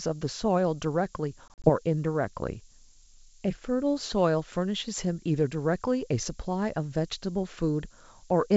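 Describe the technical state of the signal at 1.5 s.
Packet loss on an ADPCM call spans 1.48 to 1.70 s: about 80 ms of hard-edged silent gaps, none longer than 40 ms, scattered across 160 ms. After each gap the decoder's predictor and step size have drifted from the sender's, so the speech returns slightly distorted before settling. A simple dropout would resume cleanly. The low bit depth with noise shaping, at 7 bits, also puts a steady hiss about 15 dB below the signal under this moment. It climbs steeply toward the top of the band and is far stronger than the light upper-band hiss of the G.722 coding.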